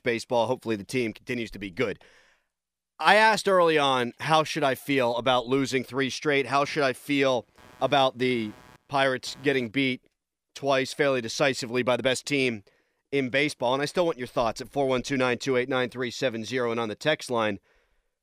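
From 6.64 s to 9.72 s there's a stretch of computer activity noise under the speech: a buzzy, chirping texture pulsing at around 150 Hz, sitting roughly 30 dB below the voice. It doesn't track the talking at all. It just switches on and then off again. That's the machine's processing load tugging on the ground the audio circuit shares, so the computer's activity bleeds straight into the recording.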